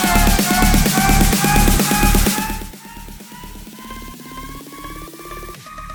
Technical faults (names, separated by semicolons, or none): none